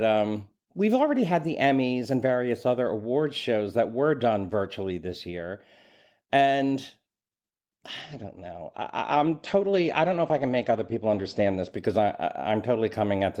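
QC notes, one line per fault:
8.03–12.63 s, call bitrate drop: the sound goes rough and muffled as the bandwidth estimate falls and the encoder starves, which fits a drop from around 32 to 14 kbps. The top end narrows from 20 kHz to 8 kHz and stays at its worst for about 3.5 s before recovering.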